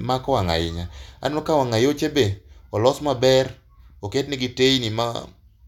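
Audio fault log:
Nothing to log here, the speech comes through without a single fault worth noting.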